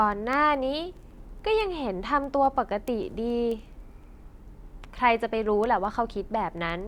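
From 0.12 s to 6.70 s, word clock ticks recur about every fifth of a second, around thirty in all: a receiver running on its own unlocked clock slips against the sender, dropping or repeating a sample each time. The strict, steady rate, unlike random clicks, marks a clock drift of roughly 100 ppm.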